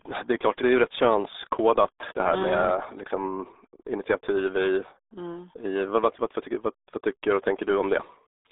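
Throughout, the speech passes through the RealAudio 14.4 codec. Its narrow 300 Hz to 3.7 kHz band, which fits an 8 kbit/s stream, leaves it muffled and gargly.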